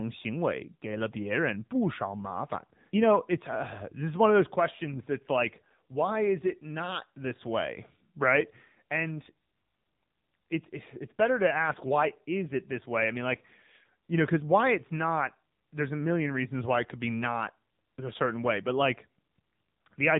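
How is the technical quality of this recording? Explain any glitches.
The quality is limited by one fault present for the whole clip. Throughout, the speech carries AMR narrowband mobile codec damage. Nothing above 3.8 kHz survives. A coarse vocal-tract model makes the voice buzzy and synthetic, which fits a low AMR-NB bitrate near 7.4 kbps.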